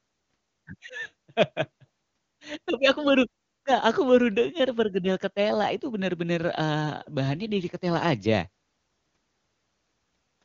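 No technical faults occur in this speech, which is carried over an AMR wideband (HD Voice) path with nothing above about 7.2 kHz.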